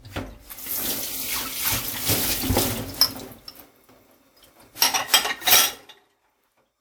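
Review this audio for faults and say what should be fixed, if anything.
Generation loss runs through the whole clip. The sound is swirly and hollow, and transients come out soft and smeared, more damaged than a single encode at this quality would leave it. It's likely the result of about four decode-and-re-encode passes through a lossy codec. The character points to something like WMA 1 at around 96 kbit/s. Each pass requantises on a shifted frame grid, so the noise and spectral holes pile up, even though content still reaches about 20.1 kHz. To prevent it, keep a lossless master and encode to the lossy format only once, at the very end.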